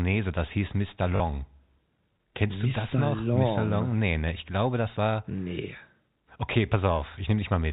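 At 1.16 s, running to 1.2 s, there's a brief packet loss with the last packet repeated: about 40 ms of audio went missing, and the receiver filled the gap by replaying the last good chunk until fresh data arrived. The gap points to two lost 20 ms packets. The replayed chunks give a quick robotic stutter, sitting over the narrow 4 kHz telephone band of the G.711 line.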